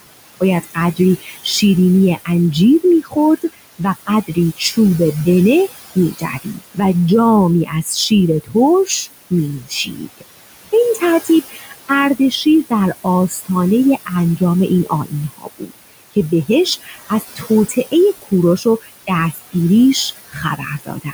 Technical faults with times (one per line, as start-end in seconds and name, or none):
0.00-21.14 noise suppressor artifacts
0.40-1.45 speech cut by the noise suppressor
2.25-4.78 speech cut by the noise suppressor
5.95-6.79 speech cut by the noise suppressor
7.65-10.23 speech cut by the noise suppressor
10.95-21.14 speech cut by the noise suppressor